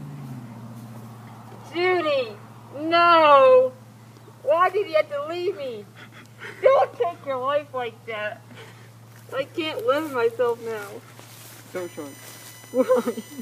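The audio carries USB whine from 11.76 s to 13.41 s: a fixed-pitch tone on a 1 kHz grid, strongest at 9 kHz and roughly 25 dB below the signal. It comes from USB's 1 ms frame current leaking through power or ground. A spectrogram would show thin, steady horizontal lines at 1 kHz multiples.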